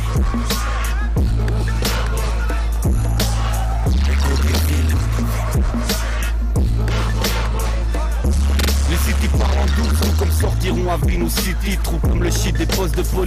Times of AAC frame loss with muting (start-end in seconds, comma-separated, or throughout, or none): none